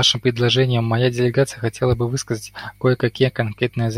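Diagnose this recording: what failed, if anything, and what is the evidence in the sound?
Mains hum is present across the whole recording, a steady low tone at 50 Hz sitting roughly 35 dB below the speech and continuing unchanged through pauses as well as talking. The fault lies in the analogue wiring stage: a ground loop between connected equipment, or a transformer close to the cabling, is coupling the 50 Hz power line into the signal path before conversion, so the tone is recorded along with the speech.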